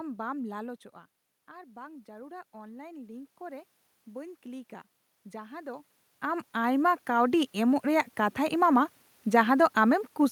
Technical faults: automatic gain rising

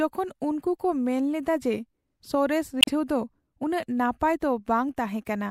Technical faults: damaged data in a compressed stream

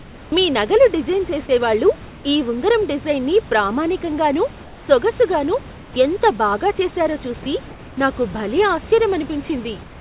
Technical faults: sound chopped by the voice detector; comfort noise in place of the background; sound dropped by the voice detector

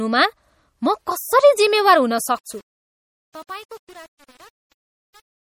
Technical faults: MP3 compression

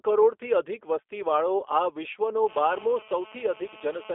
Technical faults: G.729 codec; GSM phone buzz; VoIP packet loss concealed by the speech codec

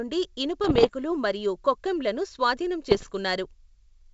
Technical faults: bit errors on an ADPCM link

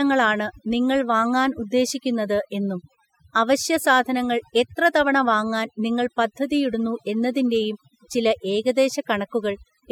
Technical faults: overdone noise removal

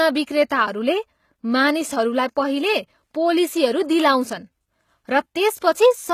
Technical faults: HE-AAC compression; pre-echo

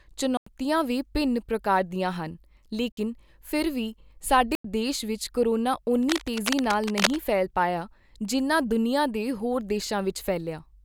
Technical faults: block of digital silence; cable scratch noise

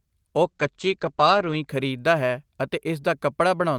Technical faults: call bitrate drop

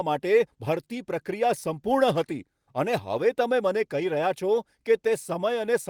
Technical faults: none

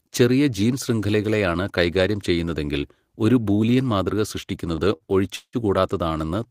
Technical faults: short stall from a late packet; call audio freeze

